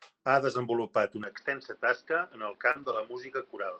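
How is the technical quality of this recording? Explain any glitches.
The recording has three problems, all after its first second. The sound degrades abruptly partway through, and a brief dropout and a stretch of rough, rebuilt audio follow close together.

Input switched to a poorer device: right after "ha desenvolupat", at 1.24 s, the sound changes character and stays that way to the end. The likely cause is that the system switched to a lesser microphone or headset input. Nothing above 5.8 kHz survives, so the sound turns dull and boxy. The level falls by about 5 dB, and a new noise floor sits roughly 35 dB under the signal. There is no gap at the switch.

Short concealed packet loss: from 2.71 to 2.77 s, about 40 ms of audio never arrived in time. The receiver covered about 36 ms of it by extending the preceding sound, carrying its pitch forward or filling with shaped noise, and then blended back into the real stream. 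The result is a brief smear or wobble.

Lost packet rebuilt from error correction: from 2.75 to 3.01 s, about 140 ms came from the low-bitrate backup copies that Opus carries inside following packets. That avoided a gap, but this stretch sounds coarser and noisier than its surroundings. The call's Opus path itself, with its cut-off near 8 kHz, is a normal part of the chain rather than a fault.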